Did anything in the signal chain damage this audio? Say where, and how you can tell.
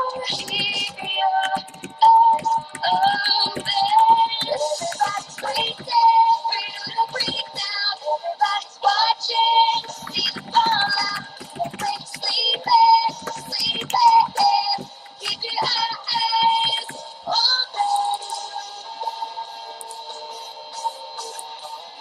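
No, nothing along the chain from capture to playback has audibly damaged this audio, so there is no stage to point to.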